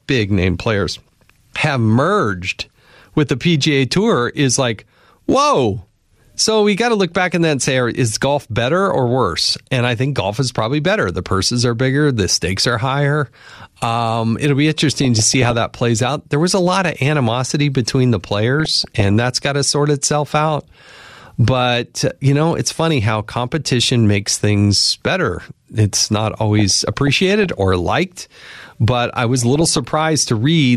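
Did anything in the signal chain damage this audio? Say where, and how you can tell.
Yes. Short blips of noise at 14.9–15.5 s (after "it'll be"), 18.6–19.1 s, 26.6–27.5 s and 29.4–30.0 s are DAB burbling. At the codec stage, bit errors slip past error correction and corrupt MP2 sub-band levels frame by frame.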